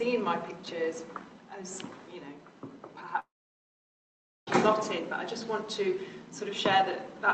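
From 3.19 s to 4.49 s the sound gives way to a fading buzz that settles into silence for about 1.2 s, then picks up again with roughly 1.28 s gone, likely a long network dropout, heard through the Opus call path's 8 kHz band limit.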